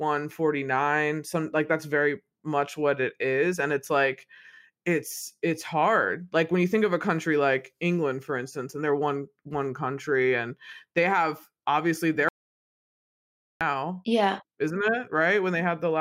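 An audio dropout to silence runs from 12.29 to 13.61 s in this speech recording, cutting the talker off mid-flow and leaving about 1.32 s of silence, with no room tone or background underneath. The speech then resumes abruptly. The likely cause is a momentary loss of the input signal, such as a disconnected device, failed link or accidental mute, while recording continued and wrote silence, so whatever was said during that gap is unrecoverable.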